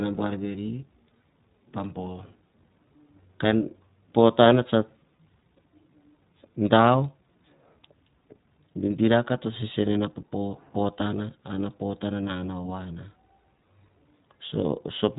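iLBC codec coding, present throughout the speech from start to end. Each short block of the signal, consistent with 20 ms frames, has its excitation coded on its own with nothing carried over from the block before, and the result sounds plainly rough and slightly synthetic. Everything above about 3.8 kHz is gone, leaving a narrow, telephone-like band, and the coarseness points to a low rate of around 15 kbps.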